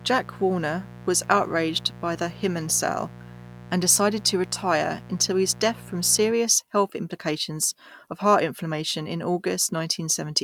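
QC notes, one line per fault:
0.00–6.32 s, mains buzz: a steady, raspy buzz sits under the speech from the start and stops cleanly just before "health complications of heart", at roughly 20 dB below the signal. Its fundamental is 60 Hz, but sharp switching spikes arriving twice per mains cycle spread harmonics up into the kilohertz range, which gives it an edge. A plain hum would be a smooth low tone with little above a few hundred hertz; this one rasps.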